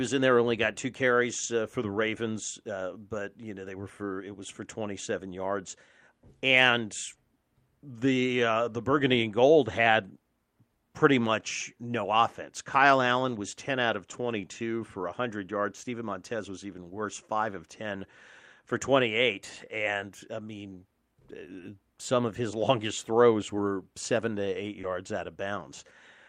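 Lost packets rebuilt from error correction occur at 1.43 s, between "got two" and "uh for the", then at 5.69 s, 13.27 s, 14.13 s just after "out of", and 23.57 s just after "longest throws". Each time one 20 ms packet failed to arrive, and the decoder played the low-bitrate copy carried in the following packet instead. There is no gap, but each spot has a brief rough, noisier grain.

A short concealed packet loss at 24.81 s lasts 20 ms. That packet had no backup copy, so the receiver extended the preceding sound to fill the hole, leaving a quick smear or wobble. The next 20 ms, from 24.83 s, is another lost packet rebuilt from error correction, so the coarse copy follows directly on the concealed section before the real audio resumes.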